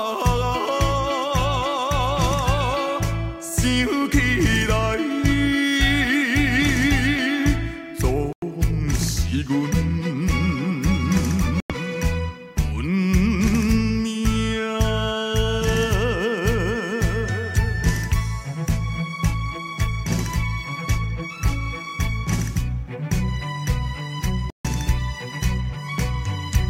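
At 8.33 s, 11.60 s and 24.50 s the audio drops to complete silence for about 0.1 s, 0.1 s and 0.14 s. These are most likely Bluetooth stalls, where delayed wireless packets let the receiving buffer run empty so playback halts until data arrives again. Unlike a codec dropout, which tends to smear or warble the sound, each gap here is a clean, hard-edged hole of silence.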